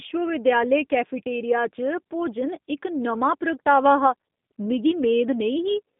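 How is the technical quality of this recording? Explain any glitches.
The recording is compromised throughout by low-bitrate telephone coding. The whole clip carries G.729 codec damage: the speech is rebuilt from a vocal tract model plus a pitch predictor and a few pulses per 10 ms frame, which fits an 8 kbit/s G.729A stream. The result sounds plainly rough and slightly synthetic, confined to about 200 Hz to 3.6 kHz with nothing above 3.7 kHz. A simple band-limiting filter would sound dull but natural. Here the buzzy, processed texture of the pulse model is what gives the codec away.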